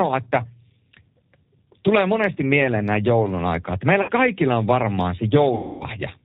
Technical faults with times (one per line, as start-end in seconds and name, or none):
0.00-6.24 G.729 codec
4.02-4.11 VoIP packet loss concealed by the speech codec
5.55-5.84 VoIP packet loss concealed by the speech codec